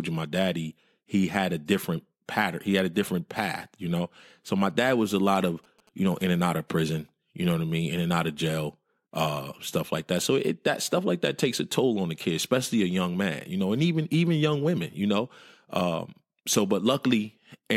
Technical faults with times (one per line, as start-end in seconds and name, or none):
4.70-6.36 GSM signalling bursts